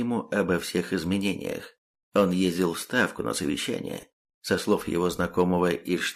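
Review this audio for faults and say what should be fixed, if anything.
Lost LE Audio frames at 1.51 s (10 ms, fitting one frame) and 4.01 to 4.03 s (20 ms, likely two frames): LC3 concealment replays the last spectrum with random signs, giving a brief noisy smear rather than the silent gap of a dropout. Improving the Bluetooth link margin or adding retransmission headroom would prevent it.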